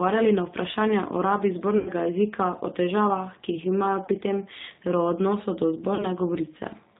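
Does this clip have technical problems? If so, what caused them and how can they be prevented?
Yes. The G.729 codec, at 8 kbit/s, cuts everything above 4 kHz. Unlike a plain low-pass filter, it also makes the speech rough and synthetic throughout, because the speech is rebuilt from a filter and a few pulses rather than passed through. Using a wideband codec such as G.722 or Opus prevents it.

VoIP packet loss concealed by the speech codec occurs at three points. From 1.78 to 1.91 s, after "na vprašanja o rabi" and before "jezika o", about 80 ms is lost. Just before "pri tem", from 4.06 to 4.10 s, about 20 ms goes. After "o odnosu do", from 5.95 to 6.07 s, about 40 ms is missing. At each point the decoder stretches the last sound into a fading buzzy tone or coloured noise, unlike the silent gap of a plain dropout, and the speech stays weak briefly after the packets return. A wired connection and a jitter buffer with forward error correction prevent it.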